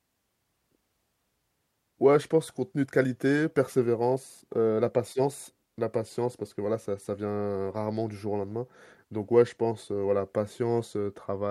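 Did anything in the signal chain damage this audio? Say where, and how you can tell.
No, nothing stood out on listening that would point to damage at any stage of the chain.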